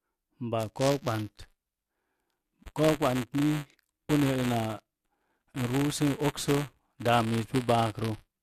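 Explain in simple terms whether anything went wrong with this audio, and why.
From 0.59 s to the end, the speech carries a steady robotic buzz at 200 Hz. This is buffer tearing: the playback and writing sides have slipped, so a small slice of every buffer replays sound from about ten milliseconds earlier, leaving hard joins.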